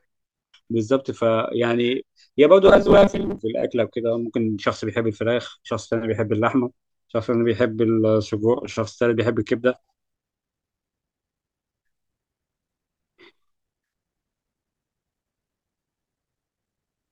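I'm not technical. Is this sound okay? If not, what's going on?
No. From about 2.65 to 3.39 seconds the speech turns into a stiff, metallic buzz, the fault called robotic sound from repeated short buffers. The buzz sits at a fixed 200 Hz, which fits a tiny slice of about 5 ms being replayed over and over, likely because new audio arrived too slowly and the software filled the wait with copies, skipping roughly half the real sound. Unlike a plain dropout, there's no silence. The voice keeps going, but only as a buzz that roughly follows it.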